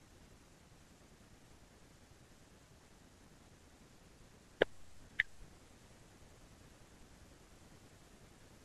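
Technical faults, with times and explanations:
Nothing faulty is audible anywhere in this speech recording.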